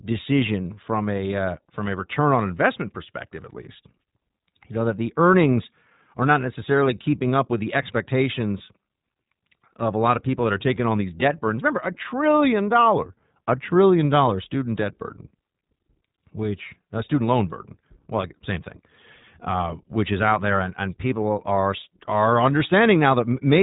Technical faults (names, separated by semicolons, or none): iLBC codec